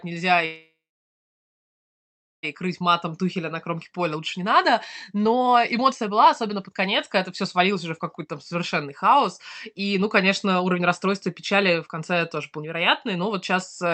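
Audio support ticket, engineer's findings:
Call audio freeze, 0.45 to 2.45 s. Packets likely stalled in transit, draining the jitter buffer. Receiver stretched the last sound into a fading tail, then about 1.7 s of near-silence. Gap inserted, roughly 2 s, with no speech lost. Playback resumes where it stopped, now running about 2 s late.

Jitter buffer speed-up, four stretches. Buffer over target after the delayed audio arrived in a burst. Receiver trimmed pitch-period slices repeatedly to shed the backlog. Pitch unchanged, pace hurried. Rates: 108% at 2.67 to 4.69 s (around 0.15 s dropped); 124% at 5.10 to 6.87 s, ending just before "когда это" (around 0.4 s); 113% at 7.30 to 9.26 s, right after "когда это" (around 0.3 s); 118% at 9.70 to 13.93 s (around 0.7 s). Opus path audible as top end stopping at 8 kHz.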